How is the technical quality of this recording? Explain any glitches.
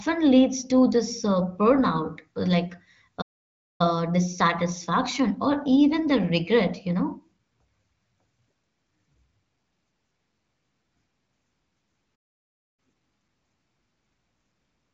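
The speech breaks off twice into silence. It has the narrow, clean band of AMR-WB wideband coding, with nothing above about 7 kHz.

Playback stalls at 3.21 to 3.81 s, before "dissatisfaction or even the", and at 12.15 to 12.79 s. The audio stops mid-flow for about 0.6 s, then resumes. The likely cause is the player running out of data.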